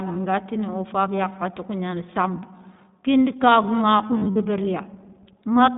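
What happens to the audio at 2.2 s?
At 2.2 s the speech carries the iLBC codec, as it does for the whole clip. The band is cut to roughly 150 Hz to 3.7 kHz, so the voice sounds thin and muffled, with no air on top. The codec rebuilds the excitation in short blocks, each coded on its own. That fits 20 ms frames in the 15.2 kbps mode. The damage is plainly audible as a rough, slightly synthetic edge on the voice.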